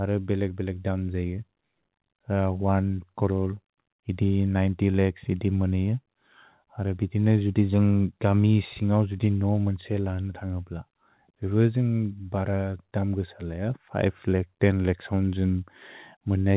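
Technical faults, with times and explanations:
No technical faults found.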